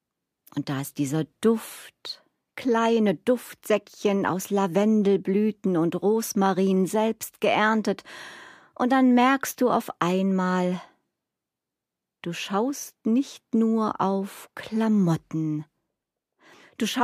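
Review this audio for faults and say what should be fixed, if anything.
Nothing here needs fixing; no faults were found.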